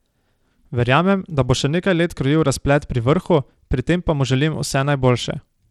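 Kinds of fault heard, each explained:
Bluetooth SBC compression: the speech has lost its top end unevenly, with the treble dropping out and flickering while a gritty grain and aliasing ride on the sound, which points to a starved bit pool around 96 kbps. This is likely the default Bluetooth codec, whose simple sub-band split with no hearing model leaves the weakest upper bands without bits. A plain low-pass filter would dull the treble steadily, with no grit or flicker.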